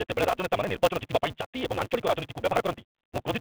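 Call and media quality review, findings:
Block size mismatch (truncated), throughout. Upstream stage writes longer blocks than downstream reads, fitting a 256-sample read; block tails discarded. Steady 188 Hz buzz; speech runs 1.88x fast at roughly normal pitch.

Sudden gain jump, 1.41–1.54 s. Likely an unramped digital gain step. Level drops about 8 dB at once, speech and background noise together, then returns, audible over the 3.5 kHz-limited G.726 line.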